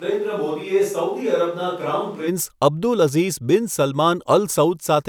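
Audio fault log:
0.00–2.26 s, switch to a distant microphone: sound is roomy, hollow and thin, about 5 dB quieter, with faint background noise. It likely comes from a farther microphone, since tone, level and noise all snap back together before "અબ્દુલ અઝીઝ બિન", unlike added reverb.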